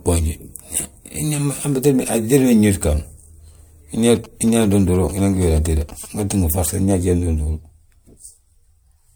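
Throughout the speech there is generation loss: a swirly, hollow quality with smeared consonant attacks, worse than a single MP3 pass should produce. The likely cause is repeated decoding and re-encoding, around four passes, each quantising on a shifted frame grid and compounding the damage. The result fits a 96 kbit/s MP3 chain.

From 4.15 to 6.06 s, GSM signalling bursts intrude: a galloping dit-dit-dit of short buzzes at about 217 Hz, roughly 20 dB below the speech. A nearby 2G phone's radio bursts are being rectified by the audio circuitry.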